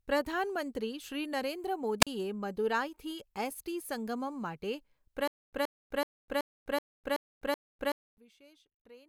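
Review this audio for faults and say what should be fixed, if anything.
A wireless microphone squelch dropout at 2.01 to 2.07 s: the radio signal fades, hiss swells briefly, then the receiver mutes for about 41 ms before the speech returns. On a spectrogram it appears as a broadband noise smear followed by a blank vertical strip. Better antenna placement or diversity reception would prevent it.

A stutter with silent gaps runs from 5.28 to 8.18 s: a 125 ms fragment plays, then 253 ms of digital silence, repeating every 378 ms, seven times, and the intervening speech is lost. The waveform shows identical short blocks separated by flat silent stretches. This is likely a stalled player or stream replaying its last buffer on each retry. Larger buffering or a more stable connection would prevent it.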